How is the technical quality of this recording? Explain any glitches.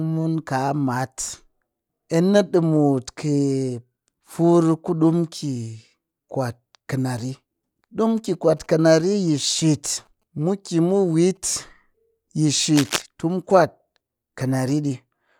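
The recording has one clear glitch, a short burst of cable scratch noise. From 12.76 to 13.02 s, dense, uneven scratching rides over the speech, only slightly quieter than it. A worn cable or connector was likely moved. Its contact resistance jumped around, and the noise followed.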